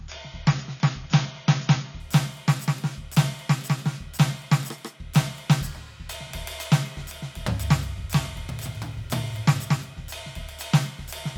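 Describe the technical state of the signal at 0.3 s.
At 0.3 s the music is in the adaptive stream starting at a low bitrate, which runs from 0.0 to 2.0 s. The player opened on a lean encoding so playback could begin immediately, then switched to a richer one once it had gauged the connection. Until the switch, nothing is present above 7.3 kHz, so the treble is gone and coding artefacts are more audible. This fits AAC at roughly 24 kbit/s stepping up to around 96 kbit/s. At 2.0 s the quality jumps without any gap.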